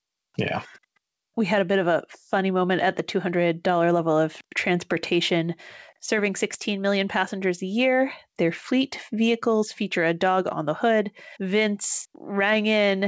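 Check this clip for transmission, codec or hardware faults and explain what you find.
No transmission, codec or hardware faults.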